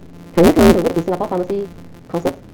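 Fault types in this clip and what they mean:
Block size mismatch (truncated): A steady buzz at 172 Hz runs through the whole speech clip, and the talking is rushed to about 1.88 times normal speed while the pitch stays roughly where it belongs. That combination points to blocks being cut short on every read, which fits a 256-sample read size. Dropping the tail of each block removes time without resampling. A sample-rate error would shift pitch along with speed.
Short concealed packet loss: At 0.87 to 0.91 s, about 40 ms of speech is replaced by a continuation of the preceding sound. It comes through as a brief smear or wobble before the real audio blends back in. It is shorter than the burst later on, where the filled sound is turned down before speech resumes.
Burst of packet loss: At 1.73 to 1.78 s, about 80 ms goes missing. It is bridged by stretching the last sound while turning it down, so a voiced sound becomes a sagging held buzz and anything unvoiced becomes a dimming hiss. 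Speech then picks up further along with that stretch skipped. Its length and fade separate it from the single short concealment, and the Opus path's 8 kHz top end colours both.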